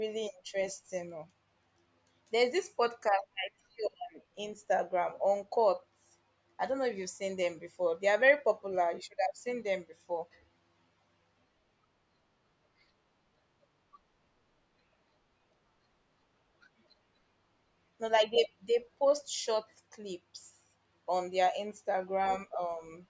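The speech signal carries no audible technical faults anywhere in the recording.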